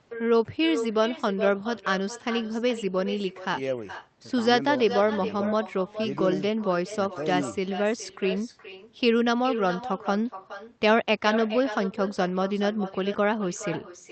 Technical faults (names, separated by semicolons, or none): echo with no canceller